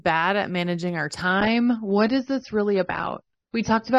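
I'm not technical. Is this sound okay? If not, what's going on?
No. From 1.24 s, right after "at managing our", to the end, an adaptive stream at a lower bitrate takes over. The connection likely slowed, so the player switched to a smaller, cheaper version of the speech, which abruptly loses its crispness above 6.3 kHz, with no gap.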